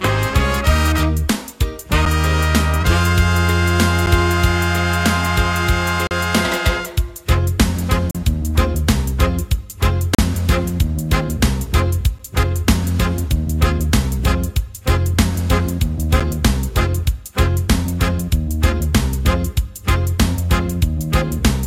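Gaps between stream segments land at 2.05, 4.06, 6.07–6.11, 8.11–8.15, 10.15–10.19, 12.19 and 16.2 s, following the 2-second segment boundaries. Each join's timestamps leave a small hole that the player fills with hard-edged silence, about 8 to 9 ms at 2.05, 4.06, 12.19 and 16.2 s and about 39 ms in the middle three. The sound simply pauses and resumes with nothing missing, so the clip grows slightly longer.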